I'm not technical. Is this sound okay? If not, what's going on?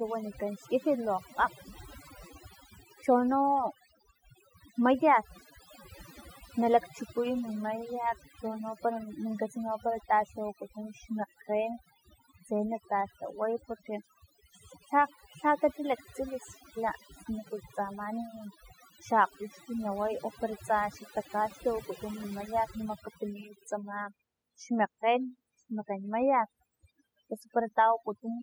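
No. Overdone noise removal runs through the whole recording: a cleanup tool set too strong strips out background noise along with quieter parts of the speech, leaving twinkling specks.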